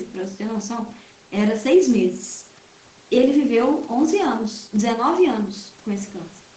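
No technical faults are audible in this speech.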